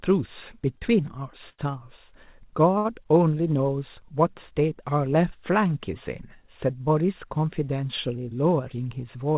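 Short stalls from late packets occur at 0.78–0.83 s, 1.49–1.73 s and 2.78–2.87 s. Each time the jitter buffer ran dry and the last sound was held for 32, 93 and 66 ms, causing slight buzzy drags. From 8.60 to 9.23 s a jitter buffer speed-up trims around 70 ms of pitch-period slices, so the speech runs about 9% fast at unchanged pitch and sounds hurried. Throughout, the band stops near 4 kHz, as expected of a narrowband G.711-type call path.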